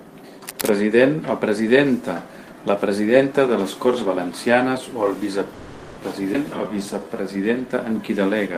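Cable scratch noise runs from 0.44 to 0.71 s. Dense, ragged bursts of noise rustle over the speech, sitting about 10 dB below it. The likely cause is a worn cable, connector or control being moved, so that its contact resistance jumps about rapidly and injects irregular noise into the signal path for that quarter-second.

A call audio freeze follows from 5.53 to 6.00 s, probably because packets were held up in transit and the jitter buffer ran dry. The receiver stretched the last sound it had into a fading buzz or hiss lasting 440 ms, never reaching full silence. When the delayed audio arrived, speech resumed exactly where it had stopped, so nothing is lost. The gap simply adds 440 ms of delay.

A skip ahead occurs at 6.33 to 6.37 s. Roughly a tenth of a second of speech vanishes, and the sides of the jump are stitched together with only about 10 ms of fill. Later audio was already waiting while an earlier stretch was dropped, either in transit or by an overflowing jitter buffer, so playback leaps forward.

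Jitter buffer slow-down follows from 6.57 to 7.23 s. To rebuild its reserve, the receiver repeated individual pitch periods and slivers of pause many times over, adding 122 ms. Speech in this stretch plays at about 83% speed while keeping its pitch, so sounds come out drawn-out rather than lower.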